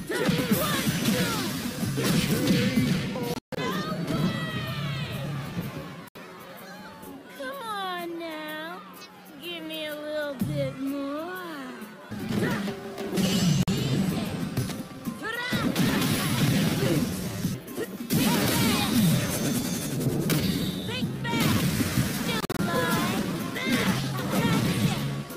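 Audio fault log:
3.34–3.57 s, 6.08–6.16 s, 13.63–13.68 s, 22.41–22.59 s: Bluetooth dropout. Audio packets likely missed their deadline to the headphones and were discarded, leaving silent holes of about 190, 70, 46 and 116 ms. The first and last are split into more than one gap, and the sound resumes further on, as if it had kept playing.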